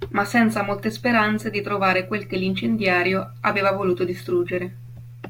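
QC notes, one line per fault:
Throughout: sample clock jitter. A faint hiss and grain ride on the speech, sitting roughly 40 dB below it and swelling on loud passages and bright consonants, because an unsteady converter clock, wandering by around 2 µs, samples the waveform slightly early or late, and the error grows wherever the signal changes fastest. Unlike a steady noise floor, it disappears in the pauses between phrases rather than hissing on through them.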